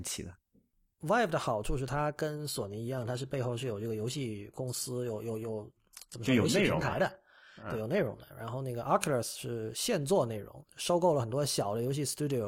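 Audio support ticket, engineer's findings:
Adaptive stream at a lower bitrate, 2.3 s to 8.3 s. Connection slowed, so the player switched to a lower-bitrate rendition. The sound fits a drop from AAC near 96 kbit/s to HE-AAC near 20 kbit/s. Speech treble turns synthetic from replicated high band, with codec artefacts rising. The switch is abrupt at both ends, with no gap. Bandwidth reaches 18 kHz outside that stretch.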